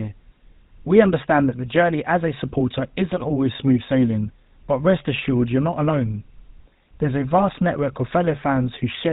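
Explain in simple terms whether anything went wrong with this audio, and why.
The speech passed through the old GSM full-rate codec, which cuts everything above 4 kHz and rebuilds the voice from pulses, so it sounds buzzy and gravelly from start to finish.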